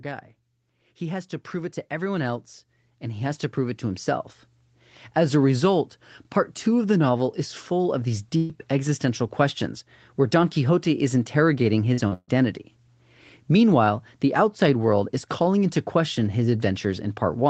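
From 0.05 to 5.46 s the speech and background swell together by about 12 dB. This is automatic gain rising, as the gain control steadily boosts what it judged too quiet an input.

At 8.37 s the sound freezes into a held, fading tail until 8.51 s, and about 120 ms of speech is skipped. This is a burst of packet loss: the receiver stretched the last sound over packets that never arrived.

At 11.93 to 12.00 s and again at 12.08 to 12.13 s there are brief smears, each about 40 ms. These are short concealed packet losses, where the decoder briefly synthesised audio to bridge the missing data.

Straight after, from 12.13 to 12.30 s, another burst of packet loss removes about 140 ms. The concealment fades out, leaving a short silence of about 50 ms before the speech resumes further on.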